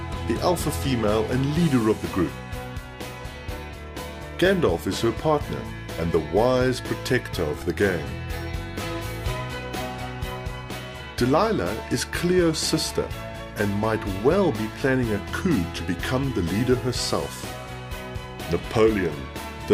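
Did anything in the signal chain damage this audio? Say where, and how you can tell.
Yes, at the driver or buffer stage: playback underran twice and the device replayed its last buffer instead of new audio, a repeated buffer. At 7.62 s a tiny fragment loops several times in quick succession, giving a brief buzz. At 13.04 s it repeats once, a single click. Each repeat lasts about 1.33 ms, which fits a 64-sample buffer, and the hard joins between copies cause the clicking. No audio appears to be lost.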